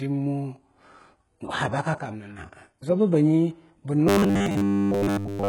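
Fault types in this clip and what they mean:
HE-AAC compression: Throughout the speech the treble is heavily damaged: sibilants come out gritty and metallic, and the upper range sounds rebuilt rather than captured, with harmonics not lining up above the crossover. This likely comes from HE-AAC coding at a bitrate around 12 kbps, where spectral band replication copies lower bands upward under a coarse envelope. Plain low-bitrate AAC would instead sound dull, with the treble simply missing.
Sudden gain jump: From 1.94 s to 2.38 s the level drops by about 6 dB, with the voice and the background noise falling together in a single step and returning abruptly. Because there is no gradual fade, the likely cause is a digital gain setting or bit shift applied without a ramp. A compressor or limiter would behave differently, acting smoothly and mainly on louder passages rather than shifting everything at once.
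Robotic sound from repeated short buffers: From 4.07 s to the end, the speech turns into a rigid, metallic buzz at 100 Hz that only loosely follows the original, and roughly 70 percent of the material in this stretch is repeated rather than new. A 100 Hz buzz fits 10 ms chunks being replayed while fresh audio is skipped, likely because data arrived too seldom. Unlike a dropout, which leaves gaps of silence, this fault keeps the sound going but replaces it with a fixed-rate drone.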